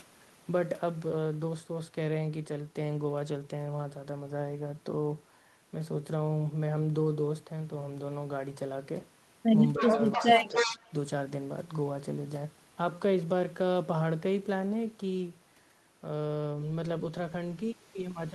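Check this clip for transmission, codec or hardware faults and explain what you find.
Two related faults turn up around the ten-second mark.

From 9.78 to 10.79 s there is an echo leak. A copy of the speech returns about 306 ms late, only slightly quieter. A loudspeaker echo escaping cancellation is the likely cause.

Speech is suppressed in double talk from 9.79 to 9.99 s and 10.16 to 10.76 s. The canceller likely ducks the talker too, causing dips of a few decibels, then deeper cuts near 10 dB.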